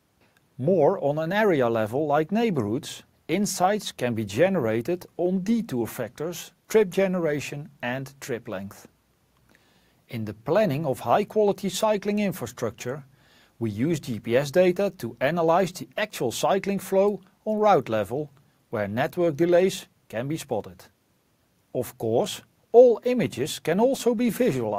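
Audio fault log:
No fault to log for this clip.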